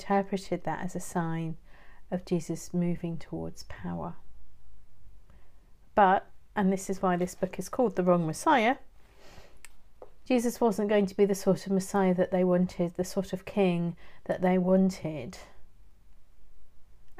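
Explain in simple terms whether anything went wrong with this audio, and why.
Nothing went wrong with this audio, and there is no fault anywhere in it to explain.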